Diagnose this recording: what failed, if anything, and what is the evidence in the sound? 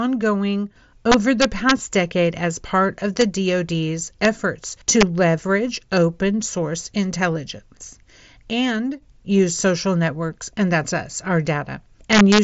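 Integer overflow in the digital gain or sample-format stage caused this. Violent cracks hit loud speech at 1.12 to 1.71 s, ending before "decade as part of". More follow at 3.21 s, just after "decade as part of", and at 4.25 s. They continue from 4.90 to 5.03 s, before "leverage open source intelligence", and from 12.13 to 12.39 s. Peaks ran only about 0 to 2 dB over full scale. They wrapped to the opposite sign instead of being limited. That is why they crack harder than clipping would, heard through the 8 kHz mSBC headset band.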